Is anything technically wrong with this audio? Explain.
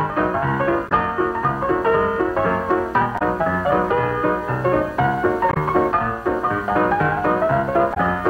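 Yes. Damaged data in a compressed stream causes four brief glitches, at 0.88–0.92 s, 3.18–3.22 s, 5.51–5.57 s and 7.93–7.97 s, each lasting about 45 to 55 ms. At each point the encoded bytes are corrupted, so the decoder misreads those frames, loses sync and hunts for the next valid frame header. Each one comes through as a short chirp, squawk, click or brief hole that cuts across the sound before normal playback resumes.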